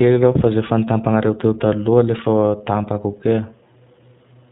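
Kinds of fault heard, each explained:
iLBC codec: the whole clip sounds like it went through a narrowband VoIP codec, and the grainy, slightly synthetic edge on the speech fits iLBC running at about 15 kbps with 20 ms frames. Each frame's excitation gets coded on its own, so there's no smoothing from one chunk to the next, and that roughness is plainly audible throughout. Nothing above 4 kHz survives either, which leaves the speech boxed-in and dull.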